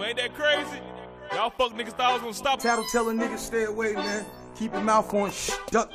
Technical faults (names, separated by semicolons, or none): stream segment skipped